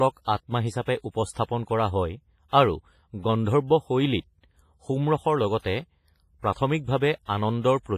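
Heavy low-bitrate WMA compression, likely around 24 kbps, runs throughout this speech clip: long-block quantisation noise smears into a washy, ringing hiss, with nothing above 15.5 kHz.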